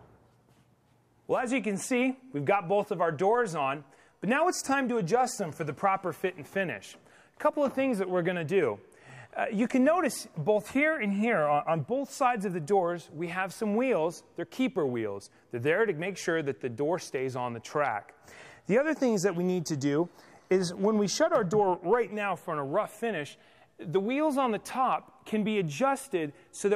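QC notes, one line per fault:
No fault found.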